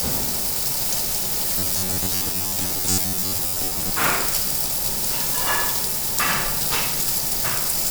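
Robotic sound from repeated short buffers runs from 1.58 to 3.91 s: the sound turns into a rigid, metallic buzz near 93.8 Hz. The likely cause is audio arriving too seldom, so a segment of about 10.7 ms is replayed in place of most of the real signal.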